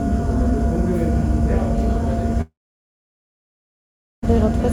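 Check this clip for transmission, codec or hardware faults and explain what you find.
One fault: a long network dropout from 2.41 to 4.24 s. The last sound carries on briefly as a fading buzz or hiss, then about 1.7 s of silence follows. No data arrived for about 1.82 s, likely a stalled stream, so the receiver filled the gap and resumed without the lost section.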